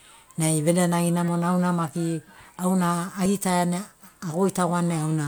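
An overlap between stream segments, recurring with the 2 s segment length, makes the player trim a few milliseconds of real speech at each boundary. This produces a small click or skip at 1.28 s, just before "auna maki auna", and at 3.26 s, just after it.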